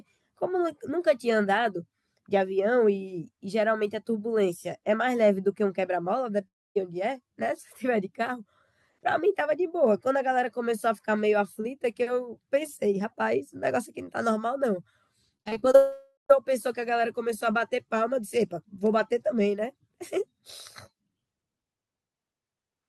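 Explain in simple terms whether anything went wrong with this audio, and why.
At 6.47 to 6.77 s and again at 15.75 to 16.31 s, the sound fades into a buzz, then goes silent. That is a long network dropout, likely from audio that never arrived, and the lost part is skipped rather than replayed. Just before the second dropout, from 15.37 to 15.75 s, repeated packet loss (robotic sound) causes six tiny gaps patched over, so it sounds choppy instead of going silent.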